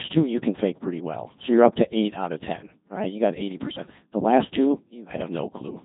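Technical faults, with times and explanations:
Throughout, Codec 2 vocoder: the speech is heavily damaged, robotic and buzzy, with nothing above 3.8 kHz. The waveform is gone. Only pitch, voicing, energy and a rough spectral shape survive, rebuilt from sine waves, which fits roughly 2.4 kbit/s.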